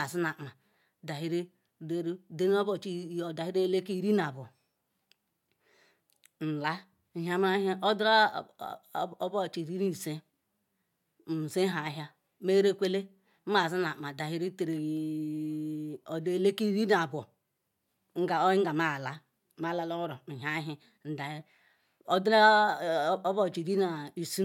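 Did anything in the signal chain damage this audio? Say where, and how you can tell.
No, nothing in the signal chain damaged this recording.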